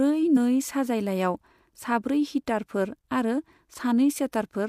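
At 0.33 to 0.37 s, damaged data in the compressed stream makes the decoder lose sync, giving a brief chirp, squawk, click or short hole before "साजायलायाव साब्रै", seen as a broadband smear and waveform discontinuity.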